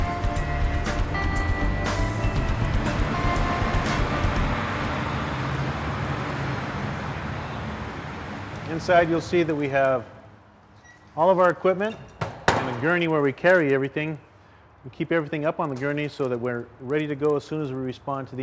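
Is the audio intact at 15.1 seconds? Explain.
No. At 15.1 seconds, as everywhere in the clip, the fault is a resampler restarted on every block. Each 50 ms block was converted separately from 44.1 kHz to 16 kHz, so every block edge is filtered against missing neighbours. The result is a small tick every 50 ms, a steady 20 Hz buzz. Unlike mains hum, it vanishes in silence, and unlike dropouts, no audio is missing.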